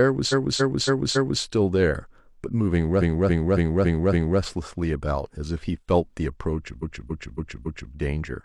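Repeated frames: the same 0.28 s block of compressed speech was decoded again and again, adding four extra plays at 0.28–1.40 s, five at 2.98–4.37 s and four at 6.78–7.90 s. Each is heard as a stutter.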